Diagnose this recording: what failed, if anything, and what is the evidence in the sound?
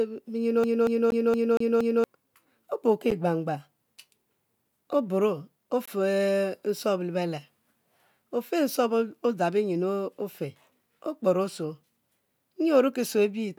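CD stuck on one turn, at the playback stage, 0.64 to 2.04 s. The same 234 ms loop repeats six times. Each jump back is briefly muted.

Blocks of digital silence, at the driver or buffer stage: 10 ms at 3.11 s, 20 ms from 5.86 to 5.88 s. Samples drop abruptly to silence with no fade.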